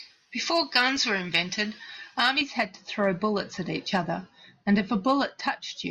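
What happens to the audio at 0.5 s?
Pre-emphasis left on, from 0.0 to 2.41 s: the treble was lifted before transmission and the matching de-emphasis was never applied, so 10 kHz sits about 11 dB above 1 kHz, which fits a J.17 curve. The speech sounds thin, bright and hissy on sibilants.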